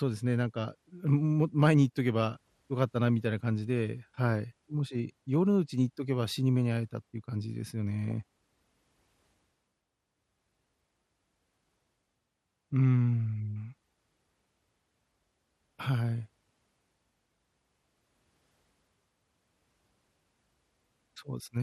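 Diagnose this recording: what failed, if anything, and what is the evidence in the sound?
The codec stage is at fault throughout. The speech is dull and the top end is missing, with a gurgling, granular roughness and upper bands that flicker in and out. That pattern points to MPEG Layer II encoding starved of bits, likely MP2 compression at a rate near 80 kbps. It differs from a plain low-pass filter because the bands that remain are coarsely quantised and unstable, not smooth.

The reception and transmission stage adds a brief burst of DAB burbling at 8.11 s. It is a short burst of noise blips in single sub-bands. Corrupted samples got past the error correction at a bit error rate of roughly 0.15 percent. It differs from packet-loss dropouts because the sound never goes silent or repeats. Instead, individual bands misfire.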